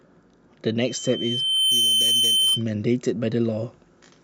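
A speech recording with loudspeaker feedback squeal from 0.80 s to 2.64 s: a pure tone at 3.1 kHz swells over about a second and ends up a few decibels louder than the speech. The microphone is picking up its own loudspeaker, and at that one frequency the loop gain tops unity, so the tone feeds itself. A spectrogram shows a single bright horizontal line brightening steadily; the waveform's envelope swells over the same span.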